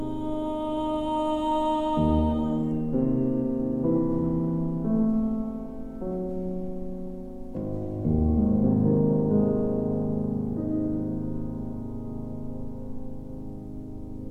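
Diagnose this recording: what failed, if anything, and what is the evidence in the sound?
Nothing failed here, and the sound gives no sign of trouble at any stage of the chain.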